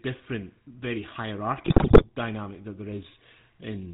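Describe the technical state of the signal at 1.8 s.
GSM bit errors are active at 1.8 s, within a burst running from 1.64 to 2.05 s. Corrupted bits are reaching the decoder, so the spectral filter, pitch and gain values it rebuilds are wrong for frame after frame. The speech breaks into squawks, pops and gargling, with sudden jumps in level.

Underneath, the GSM full-rate codec, consistent with 13 kbps, is present here as it is throughout the clip. It rebuilds the voice from a vocal-tract model driven by sparse regular pulses and cuts everything above 4 kHz, leaving a plainly audible buzzy, gravelly roughness.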